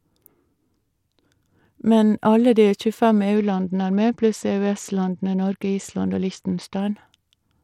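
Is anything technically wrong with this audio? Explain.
Yes. A Bluetooth SBC bit pool drop runs from 3.36 to 6.8 s: starved of bits, upper sub-bands vanish and the rest coarsen, dulling the treble with gritty noise, consistent with a fall to roughly 78 kbps.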